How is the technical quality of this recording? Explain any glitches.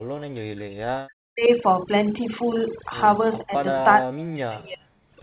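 The technical quality is poor: the speech has a processed character from start to finish, and it is pushed far down for long stretches.

Overdone noise removal runs through the whole clip. The background collapses to near silence sprinkled with twinkling specks, and the speech loses its quieter details. A noise reduction stage set far too aggressively caused this. It drives individual frequency bands down or off whenever they sit close to its noise estimate, and it takes the softer parts of the speech away along with the noise.

Speech suppressed in double talk affects four spans: 0.0 to 1.51 s, 3.41 to 3.54 s, 3.71 to 3.76 s, and 3.95 to 5.01 s. In the first and last spans the speech sinks very deep, by roughly 40 dB, to almost nothing. At 3.41 s the dip is moderate, and at 3.71 s it is only slight. The likely cause is an echo canceller facing simultaneous talk from both ends. It could not separate the local talker from the loudspeaker echo, so it turned everything down.

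The band ends near 4 kHz, which fits a narrowband telephone codec.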